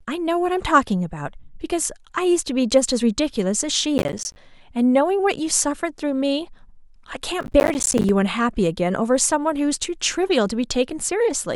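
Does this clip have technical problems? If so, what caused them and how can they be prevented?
Yes. Processor overload crackle at 3.98–4.36 s and 7.41–8.09 s: many buffers of around 10 ms missed their deadlines and dropped to silence, causing gritty tearing. Prevent it with larger buffers or lighter processing load.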